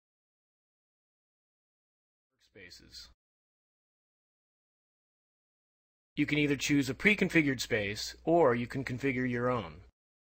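No technical faults can be heard anywhere here.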